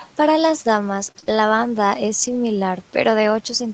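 From 1.07 to 2.36 s, just after "las damas", scattered short gaps: about three lost packets, 60 ms missing, were patched by extending prior sound, leaving brief ticks and smears.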